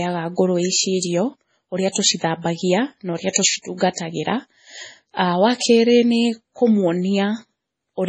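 From start to finish the speech stops dead at about 9.2 kHz, with nothing above it, and carries the smeared, watery swirl of heavy MP3 coding. This is most likely low-bitrate audio saved at a high bitrate. A very low-rate MP3 stage, around 24 kbit/s by the sound, removed the top band and left artefacts that a later high-rate MP3 pass cannot restore. A plain low-pass filter would leave the cut-off without the swirl.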